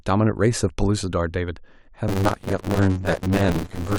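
It's a speech clip, and from 2.08 s to the end there's buffer tearing: a rattly, robotic buzz at about 94 Hz, which fits a 512-sample buffer. Writer and reader have slipped, so most of each buffer replays audio about 30 ms stale, with hard joins.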